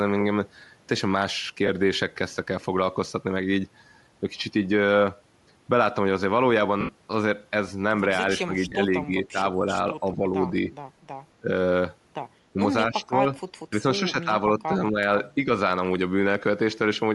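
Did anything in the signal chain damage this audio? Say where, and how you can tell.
Yes. The codec stage left its mark across the whole clip. The speech has a breathy, grainy edge that stays from start to finish, and the codec damage is plainly audible. This is likely Bluetooth LC3 compression, and the texture fits LC3 at around 48 kbps with 10 ms frames. At that rate the encoder zeroes many upper spectral bins. The decoder fills them with noise, which gives the sibilants and vowels that rough sheen.

Lost LE Audio frames show up at the network and transport stage three times: 1.67 to 1.69 s (20 ms), 6.81 to 6.89 s (80 ms), and 8.69 to 8.72 s (30 ms). Each gap sounds like a brief noisy smear rather than a clean cut. The decoder repeats the last spectrum with scrambled signs. The 80 ms gap is the worst. Its length fits about eight missing frames, so the concealment audibly fades as it runs on.

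Speech suppressed in double talk points to the call-processing stage. The talker dips at 8.45 to 9.65 s, 10.0 to 10.22 s, 11.41 to 11.48 s, 12.53 to 12.57 s, 12.89 to 13.25 s, 13.7 to 14.97 s and 15.35 to 15.48 s. The drops run from about 5 to about 15 dB, and the deepest is near 13 s. The likely cause is an echo canceller that could not tell this talker from the far-end echo, so it pulled both down in pieces.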